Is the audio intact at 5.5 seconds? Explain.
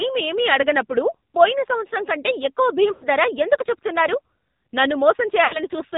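No. From 5.44 to 5.57 s there are lost AMR speech frames: about 80 ms failed their checks, which fits a run of four 20 ms frames. The decoder repeated its last good pitch and vocal tract settings at falling gain, so the sound smears and sags toward silence before recovering briefly rough.

The AMR narrowband mobile codec also applies here, as it does throughout. Nothing above 4 kHz passes, and the buzzy, synthetic quality of the pulse-driven vocal tract model is plainly audible, which fits the low-rate 7.4 kbps mode.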